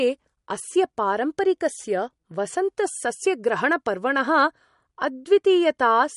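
An encoder short of bits, likely an MP3 encoder running at a low bitrate in the region of 48 kbps, affects the speech from start to finish. Starved of data, it discards everything above about 11.2 kHz and drops weak frequency lines that then flicker on and off between frames. The MP3 compression damage is plainly audible: the speech has a watery, swirling texture, s sounds turn metallic and chirpy, and the treble ends abruptly.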